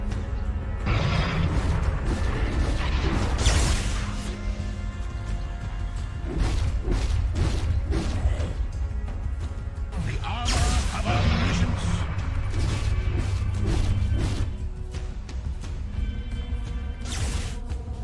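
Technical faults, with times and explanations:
No technical faults can be heard anywhere in this clip. There is nothing to time or explain.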